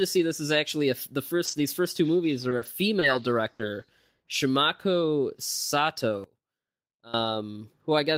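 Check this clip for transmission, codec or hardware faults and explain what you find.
The speech carries four kinds of network and playback faults, all clustered between 1.45 s and 7.14 s.

Short concealed packet loss at 1.45–1.49 s, right after "is actually a the": 20 ms of audio never arrived, and the decoder extended the preceding sound to cover it. This gives a brief smear or wobble. A spectrogram shows a smoothed, slightly blurred 20 ms patch where fine detail stops.

Lost packets rebuilt from error correction at 1.47–1.49 s, 1.51–1.53 s and 1.57–1.59 s, the last just before "first two movies": each 20 ms frame was decoded from a low-bitrate backup copy. The sound turns rough and grainy, and the spectrogram shows noisier, coarser texture in those slices.

Repeated packet loss (robotic sound) from 2.49 to 3.81 s: four gaps totalling 140 ms, the longest 60 ms, about 11% of the stretch, were patched by continuation, with roughly a tenth of a second more rebuilt. 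The result is choppy speech with pieces missing. The waveform shows repeated, overly regular cycles, and the spectrogram shows smeared harmonics.

One channel inverted from 6.24 to 7.14 s: the level falls by about 21 dB, leaving a faint residue of the voice. The likely cause is one stereo channel with reversed polarity cancelling the centred voice on mono summing. The waveform shrinks abruptly, and the spectrogram goes pale.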